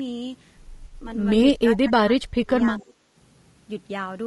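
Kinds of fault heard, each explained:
Low-delay AAC compression: The whole clip has a rough, grainy texture, with noise between the pitch harmonics and a thin, artificial top band. The damage is plainly audible, likely from a low-delay AAC codec at 32 kbps, whose short frames resolve pitch poorly. Unlike a one-off glitch, it never lets up.
AAC frame loss with concealment: From 0.85 to 0.94 s, about 60 ms of sound is replaced by a smeared, noisy patch that the decoder fills in from the preceding spectrum. It is brief and textured rather than silent, which sets it apart from a dropout or gating cut.
Speech suppressed in double talk: Between 1.57 and 3.0 s the speech repeatedly dips and breaks into pieces, with drops as deep as roughly 30 dB and about a second of sound affected in all. The likely cause is an echo canceller ducking the near talker during simultaneous talk. It is patchy, not a steady level loss.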